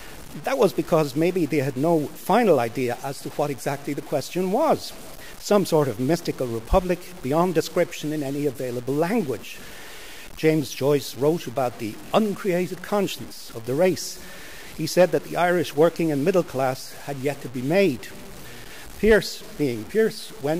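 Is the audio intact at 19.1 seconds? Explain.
No. At 19.1 seconds the speech carries the same low bit depth without dither that runs through the whole clip. The sound is grainy and gritty, with distortion that rises and falls with the voice, and the quietest parts sputter or drop out between coarse steps. That points to a likely cause of truncation to about 6 bits with no dither, so the rounding error tracks the signal, sitting only about 20 dB below it.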